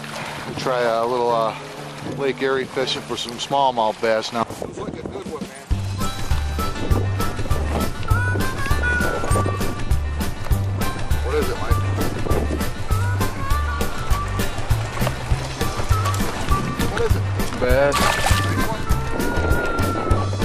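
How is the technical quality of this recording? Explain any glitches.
The technical quality is limited: the whole recording carries plainly audible coding damage, and one short glitch occurs near the end.

MP2 compression, throughout: The sound is dull and granular, with a gurgling edge, which is most likely from MPEG Layer II coding at a low rate, consistent with around 80 kbps. The coder divides the spectrum into 32 sub-bands and shares out a tight bit budget, so upper bands drop out or flicker while the remaining bands are coarsely quantised.

DAB burbling, at 17.64 s: A brief burst of burbling cuts across the audio. Reception errors slipped past the error correction into the MP2 data at a low rate, roughly 0.07 percent, corrupting samples across five frames. The wrong samples put short blips of noise into individual sub-bands before the sound settles.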